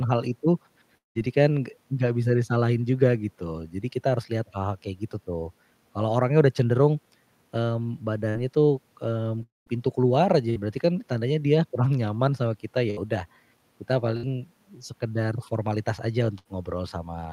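A long network dropout likely causes the gap at 0.97–1.18 s. The sound stretches into a fading buzz or hiss, then near silence, and resumes with about 180 ms missing.

A burst of packet loss at 8.29–8.38 s cuts out about 60 ms. The last sound is held briefly as a decaying buzz or hiss, then the audio jumps ahead.

A long network dropout likely causes the gap at 9.43–9.69 s. About 240 ms is lost, and the concealment fades out well before the audio returns.

Further bursts of packet loss occur at 10.50–10.58, 12.90–13.00, 14.17–14.25 and 16.38–16.48 s. Each drops about 60 ms behind a short fading buzz or hiss.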